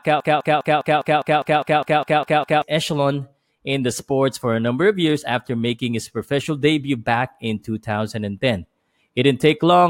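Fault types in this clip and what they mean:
Broken-record loop: the speech opens already stuck, with the same 0.2 s fragment cycling back to back about a dozen times until 2.62 s. That's likely a stalled player or stream resending its last chunk, so whatever should have played there is gone.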